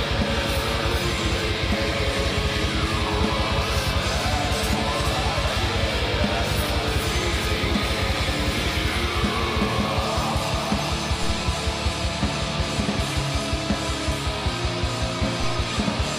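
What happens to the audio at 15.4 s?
At 15.44 s a DC step occurs. The waveform's zero line suddenly jumps to a new resting level, an offset of about -19 dBFS. It is the kind of shift a converter recalibrating or a biased input being switched in would cause. The jump is heard as a single low thump. The sound itself carries on unchanged. The offset then drifts back toward zero, as a 2 Hz high-pass would pull it.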